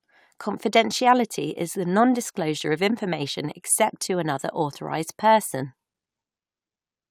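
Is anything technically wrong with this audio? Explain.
No, nothing technically wrong stood out on listening to this speech recording.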